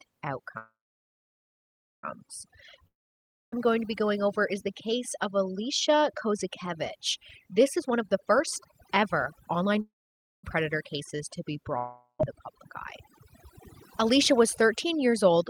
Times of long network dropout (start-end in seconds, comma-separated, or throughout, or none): 2.87-3.66, 11.77-12.21